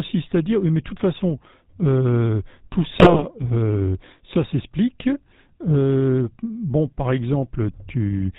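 GSM full-rate codec coding runs throughout: the vocal tract is modelled and driven by sparse regular pulses, nothing passes above 4 kHz, and the speech sounds plainly buzzy and gravelly, which fits 13 kbps full-rate coding.

GSM bit errors strike from 3.00 to 3.23 s, where corrupted filter, pitch and gain values distort the spectrum and level, breaking the speech into squawks and gargling across roughly eight frames.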